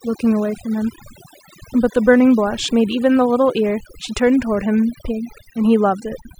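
Overdone noise removal runs through the whole speech clip. The reduction was set too aggressively, so frequency bands near the noise estimate are pulled down hard or cut entirely, taking quiet speech detail with them. Gaps fall to near silence with twinkling specks.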